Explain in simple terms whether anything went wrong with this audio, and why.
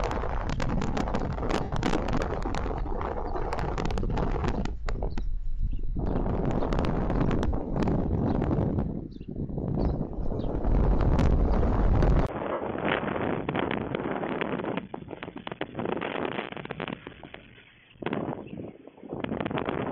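Lost LE Audio frames: the wireless link dropped short bursts of audio at 1.63, 5.63, 7.47, 10.33 and 12.52 seconds, each lasting between about 45 and 90 milliseconds. The receiver filled each gap with a rough copy of the preceding moment, so the sound briefly smears into a hissy blur.

Input switched to a poorer device: at 12.27 seconds the sound cuts out for about 20 milliseconds. It then returns quieter, noisier and dull, with nothing above 3.4 kHz, until the end of the clip. The likely cause is the system switching to a lower-quality microphone or headset call mode.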